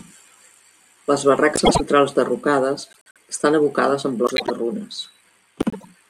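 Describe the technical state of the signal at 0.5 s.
Nothing is wrong with the signal at 0.5 s; the speech is intact at that point.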